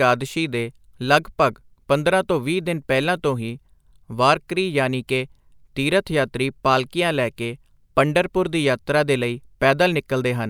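A speech recording with no audible technical faults anywhere in the signal.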